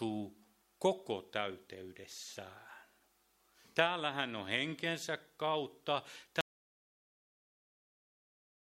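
The input feeding the recorder was most likely lost at 6.41 s, through a disconnected device, a broken link or an accidental mute, while the recording went on writing silence. The result is an audio dropout to silence: the sound stops abruptly in mid-flow and what follows is silence, with no room tone left, lasting right to the end of the clip. Whatever was happening after that moment was never captured.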